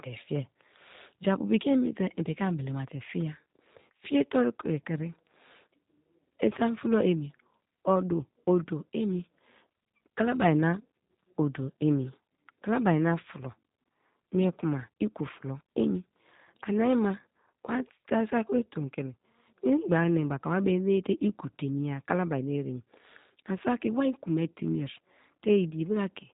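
From start to finish the speech carries G.729 codec damage, and it is plainly audible. The content above about 3.8 kHz is gone, which gives the narrow telephone-band sound. The coder rebuilds each 10 ms frame from a vocal tract filter, a pitch predictor and a sparse set of pulses, so the speech comes through slightly rough and synthetic, with a buzzy, processed edge. This fits an 8 kbit/s G.729A stream.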